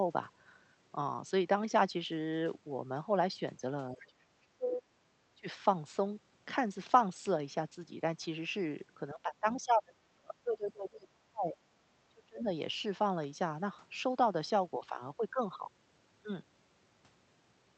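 Speech suppressed in double talk, 3.92 to 4.84 s: the speech dips by roughly 30 dB, likely an echo canceller ducking everything while both sides talked. Other side's voice leaking through, 4.00 to 4.09 s: a faint second voice, about 25 dB below the speech, slips in briefly, probably residual loudspeaker echo the canceller missed. The same suppression returns at 5.35 to 5.47 s as a shallower dip of about 20 dB, then at 9.14 to 11.57 s, where roughly two seconds of speech sink by about 30 dB, and finally at 12.09 to 12.47 s with another deep drop.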